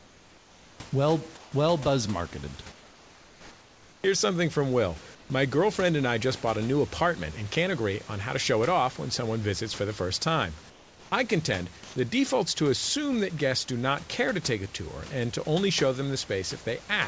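Speech recording with comfort noise in place of the background at 0–0.8, 1.37–1.52, 2.72–4.04, 5.15–5.3, 10.7–11.12 and 11.84–11.96 s: the room noise becomes flat, featureless hiss, about 2–5 dB quieter (about 2 dB louder at 11.84 s), likely from discontinuous transmission substituting synthetic noise during pauses.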